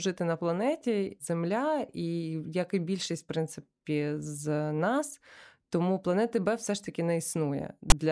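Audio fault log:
7.90 s, file tags played as audio: near the end of the speech, a block of text tag bytes is decoded as samples, giving a brief, loud rasp biased to one side. The waveform shows a hard-edged, offset slab, and the spectrogram a broadband vertical stripe.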